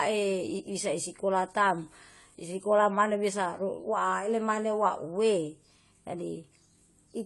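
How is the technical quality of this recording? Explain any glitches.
Plainly audible codec damage runs through the whole recording. AAC compression, throughout: likely AAC-LC at a low bitrate, fitting about 32 kbps, removing everything above 11.5 kHz and leaving the speech dull and smeared.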